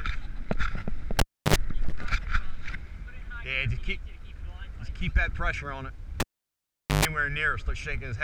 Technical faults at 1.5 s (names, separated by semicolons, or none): cable pulled and plugged in